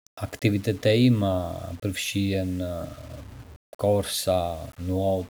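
No faults are present in the speech recording.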